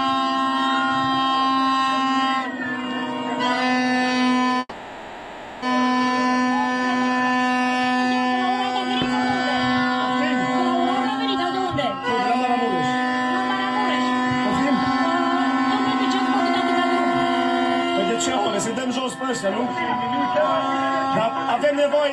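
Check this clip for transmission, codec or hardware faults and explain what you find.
Yes, there are two kinds of fault: a single call audio freeze and three stretches of jitter buffer speed-up.

From 4.59 to 5.64 s there is a call audio freeze. The last sound hangs on as a fading buzz or hiss for about 1.03 s and drops briefly to silence. Then the audio resumes where it stopped, about a second later than before, with nothing lost. The likely cause is delayed packets emptying the jitter buffer. On a spectrogram this shows as frozen, repeating bands that dim away, and the waveform shows a decaying, looping pattern.

Jitter buffer speed-up occurs at 10.97–12.85 s (106%), 18.88–20.34 s (103%) and 21.06–22.02 s (104%). The receiver cuts pitch-period-sized pieces to drain excess buffered delay: roughly a tenth of a second in the first stretch and about half that in each of the others. The audio runs faster but keeps its pitch, and the first stretch sounds hurried. 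A spectrogram shows the same harmonics over a slightly compressed timeline, and the waveform has tiny splice points.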